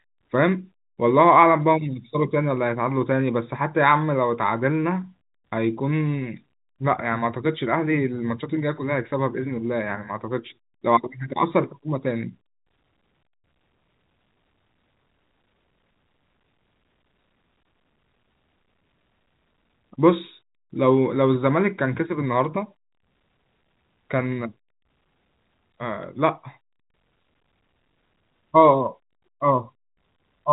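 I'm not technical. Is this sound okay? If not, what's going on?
Yes, nothing is wrong with this speech recording. It sounds like an ordinary phone call because it went through standard telephone coding (G.711), which keeps nothing above about 3.8 kHz and so leaves the voice a little narrow and less crisp than in person.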